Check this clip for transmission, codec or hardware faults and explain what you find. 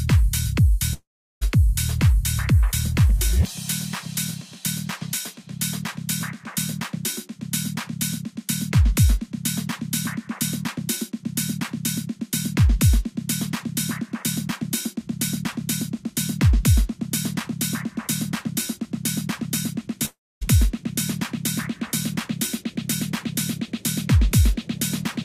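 Two gaps, at 0.93 to 1.43 s and 20.05 to 20.43 s, point to a likely long network dropout. Packets stopped arriving, so the receiver stretched the last sound into a fading buzz, then silence (about 360 ms and 240 ms), before audio resumed past the lost part.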